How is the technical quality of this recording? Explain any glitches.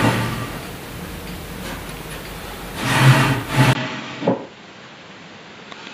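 The recording has one clear glitch near the end. At 3.73 s, after a brief gap of about 20 ms, the sound turns duller and roughly 10 dB quieter until the end, with nothing above 7.6 kHz and a faint new noise floor. The cause is likely an input switched to a poorer device, a narrower-band microphone with its own tone, level and background noise.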